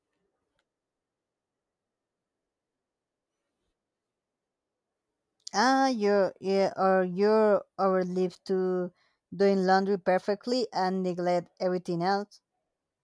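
No technical faults can be heard anywhere in this speech recording. There is nothing in it to place on a timeline or trace back to a point in the signal chain.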